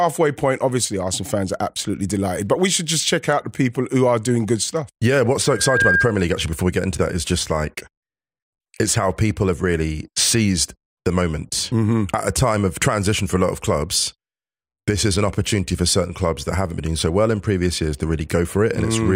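A single 1.6 kHz tone swells in over a few tenths of a second from 5.46 s to 6.18 s, ending slightly louder than the speech: loudspeaker feedback squeal, the microphone re-amplifying its own speaker output.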